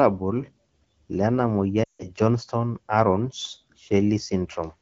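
From 1.84 to 2.07 s the speech quickly fades to near silence, then returns briefly weak or rough. These are lost AMR speech frames: about 160 ms of coded speech failed its checksum, which fits a run of eight 20 ms frames. The AMR-WB decoder kept repeating the last good pitch and vocal tract settings at falling gain, and in wideband that fade comes fast.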